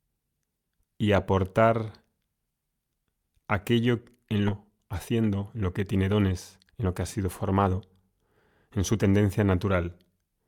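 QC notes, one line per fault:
4.47–4.49 s, skip ahead: right after "aquello en" the speech jumps forward, and about a second of audio is missing. The two sides are joined with no filled gap, so the speech continues abruptly mid-flow while later audio was already queued.
4.71–8.27 s, jitter buffer speed-up: the receiver trims short pitch-period chunks repeatedly to drain its excess delay, removing roughly 0.4 s in total. The speech runs at 110% speed without any pitch change, so this stretch sounds hurried.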